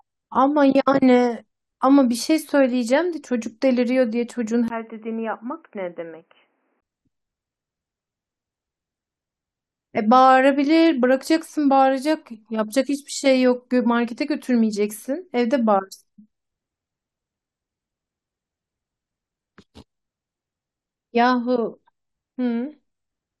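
Speech, in which the recording input was likely switched to a poorer device from 4.68 to 6.82 s. After a 20 ms gap, nothing reaches above 3 kHz, so the sound turns dull and boxy. It also drops a few decibels and carries a faint new background noise.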